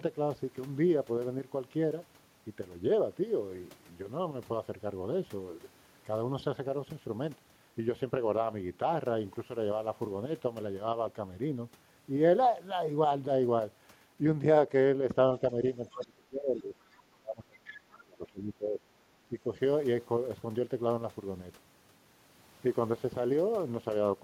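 From 15.77 to 16.74 s the speech dips by up to about 25 dB, with faint leakage of the other side's voice at 15.89–16.05 s. This is speech suppressed in double talk, likely from an echo canceller ducking both talkers. Another faint scrap leaks through at 16.91 s. Suppression deepens to about 30 dB from 17.04 to 18.8 s, while the other side's voice leaks more clearly, about 20 dB down, at 17.65–17.96 s. That leakage is likely echo left uncancelled. A mild 10 dB dip follows at 19.29–19.49 s.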